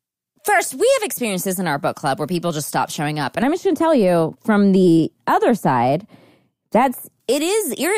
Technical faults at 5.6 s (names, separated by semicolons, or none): de-emphasis applied wrongly